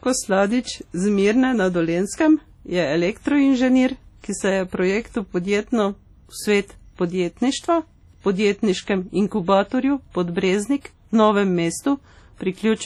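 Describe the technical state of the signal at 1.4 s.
At 1.4 s the speech carries the heavy codec damage present throughout, likely from WMA compression at a low bitrate, around 32 kbps. It sounds ringing and washy, with hiss breathing with the voice. A spectrogram shows patchy, blocky gaps where weak components were zeroed, extending to about 20.1 kHz.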